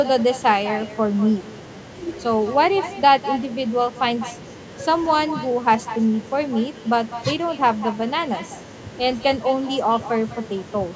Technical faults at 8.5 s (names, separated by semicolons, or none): echo with no canceller